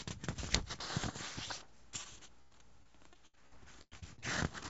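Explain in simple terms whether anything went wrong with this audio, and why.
From 2.04 to 4.24 s there was repeated packet loss (robotic sound): eleven pieces of the call audio went missing, the longest about a tenth of a second, and each was patched by stretching the preceding sound. This makes the sound choppy and mechanical, with bits missing.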